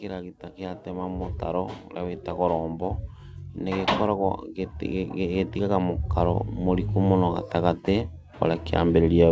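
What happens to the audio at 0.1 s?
Automatic gain rising, 0.05 to 3.09 s: the gain control, finding the input too quiet, lifts speech and background together by about 6 dB, gradually rather than in one step.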